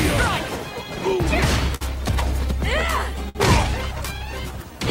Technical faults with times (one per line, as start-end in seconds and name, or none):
0.00-4.90 video or display buzz
0.00-4.90 clock drift between sender and receiver
1.75-1.83 short stall from a late packet
3.29-3.37 short stall from a late packet